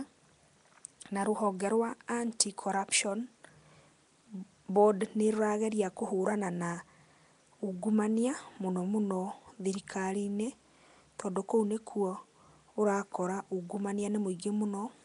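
The speech runs through what is likely Nellymoser compression for its whole length, with plainly audible codec damage: a rough, hissy halo around the speech and a smeared, underwater blur, which fits a rate around 44 kbps. On a spectrogram the energy stops flat at 10.6 kHz, with nothing above, and below that the quieter bands show as grainy noise fill instead of clean harmonics, in blocky time slices where each coded frame is smeared across its short window.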